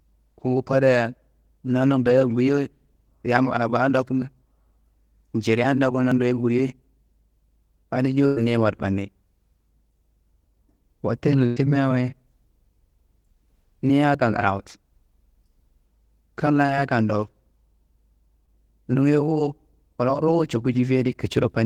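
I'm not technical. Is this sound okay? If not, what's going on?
No. At 2.03, 16.66 and 18.46 seconds there are brief smears lasting a few hundredths of a second. This is short concealed packet loss: a bit of the call arrived late, and the receiver patched the gap by stretching the sound before it.

At 6.12 and 14.15 seconds the speech jumps slightly ahead. That is likely a dropped buffer (overrun), where the recording device lost a tiny slice of audio.

At 8.26 to 8.38 and 11.46 to 11.58 seconds, the last sound is held and fades for about a tenth of a second. This is a burst of packet loss: several pieces of the call in a row went missing, and that stretch of speech is gone.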